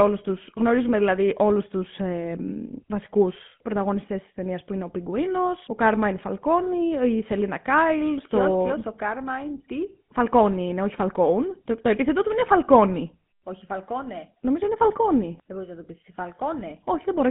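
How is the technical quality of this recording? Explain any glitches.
Quality is poor, held back by one fault present for the whole clip.

GSM full-rate codec, throughout: the speech has been squeezed through an early mobile-phone codec that models the vocal tract and feeds it a sparse, regularly spaced pulse excitation. The result is a plainly audible buzzy, gravelly roughness. Band-limiting runs roughly 150 Hz to 3.5 kHz, with nothing above 3.8 kHz, and the damage fits a 13 kbps GSM stream.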